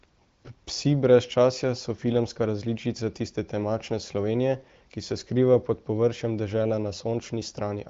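No technical faults can be heard in this speech clip. It passes through the AMR wideband (HD Voice) codec, which shows as a band limit with nothing above about 7.4 kHz, and at most faint coding damage, which fits one of the higher AMR-WB rates near 18 kbit/s.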